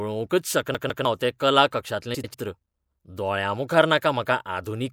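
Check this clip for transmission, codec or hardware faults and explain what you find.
Two faults stand out in this speech clip.

From 0.75 to 1.05 s there is a CD stuck on one turn. The same 0.15 s slice plays twice more, with a brief mute at each jump. A scratch keeps knocking the laser back one track, giving a quick, even stutter.

From 2.14 to 2.35 s there are frames out of order. Two neighbouring runs of 96 ms each were swapped before decoding, which fits four frames per run. That stretch sounds garbled and fluttery. No time is lost.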